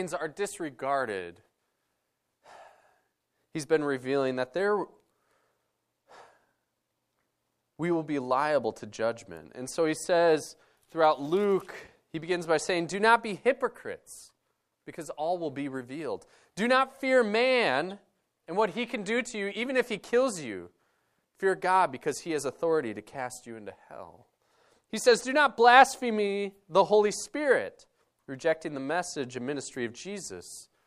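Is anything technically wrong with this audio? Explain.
No, there is nothing technically wrong with this audio.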